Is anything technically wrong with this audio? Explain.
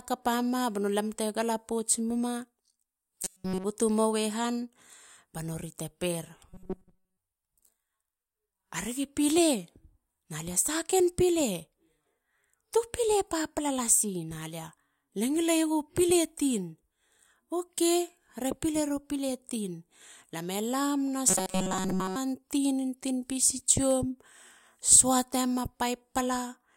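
Yes, the speech has three bursts of robotic sound from repeated short buffers: 3.24 to 3.65 s, 6.49 to 7.17 s (just after "ba nori te per"), and 21.28 to 22.16 s. The voice becomes a rigid metallic buzz at a fixed 188 Hz, likely because audio arrived too late and a slice of about 5.3 ms was replayed in its place. The first burst is almost entirely repeats, and the later two are mostly repeats. On a waveform the repeated slices show up as an identical cycle tiled every 5.3 ms. A spectrogram shows flat harmonic lines at 188 Hz and its multiples.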